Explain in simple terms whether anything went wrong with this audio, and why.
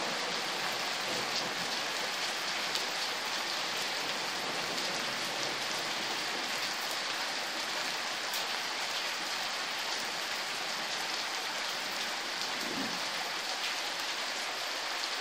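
At 2.42 s and again at 4.64 s, the sound jumps forward. A tiny slice is missing each time, a few hundredths of a second. This is likely a dropped buffer (overrun): the hardware overwrote that audio before the program collected it.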